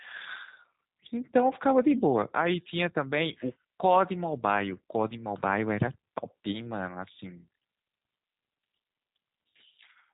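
Throughout, the speech sounds rough and synthetic with nothing above 3.8 kHz, plainly G.729 codec damage: a model-based rebuild that fits 8 kbit/s.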